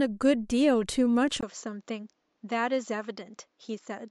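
At 1.41 s the speech drops out for a 20 ms gap, then carries on to the end duller and about 5 dB quieter, with nothing above 7.6 kHz and a faint new background noise underneath. The likely cause is the input switched to a poorer device mid-recording.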